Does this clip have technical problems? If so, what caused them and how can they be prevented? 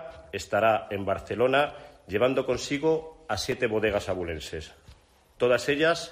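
Yes. A block of digital silence occurs at 3.52 s. The sound cuts out and returns with no fade, so it comes across as a single tick. Its 2.9 ms length fits a 128-sample buffer that was not filled in time. Larger buffers or lighter processing load prevent this.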